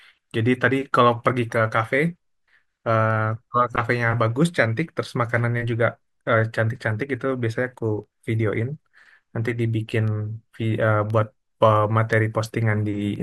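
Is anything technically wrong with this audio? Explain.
Yes. From 4.97 s to 13.16 s the speech carries periodic USB or driver dropouts, about ten in all, spaced 1.024 s apart. Something blocks the audio driver at a fixed interval, and a tiny sliver of signal, a fraction of a millisecond, is replaced by silence each time. Each loss is heard as a regular tick while the speech is sounding. On the waveform these are hairline gaps, and on a spectrogram they are thin broadband vertical lines at even spacing.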